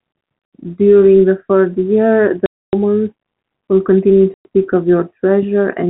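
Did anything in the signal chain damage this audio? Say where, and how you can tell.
Yes. Packet loss filled with silence occurs at 0.45 to 0.52 s, 2.46 to 2.73 s, and 4.34 to 4.45 s. These are network-stage dropouts where the speech cuts to dead silence for 70 ms, 270 ms and 110 ms, with hard edges. All three lengths are multiples of 10 ms, which fits lost runs of 10 ms packets. The receiver inserted silence rather than concealing the gaps, while the band-limited G.711 telephone coding carries straight through the speech on either side of them.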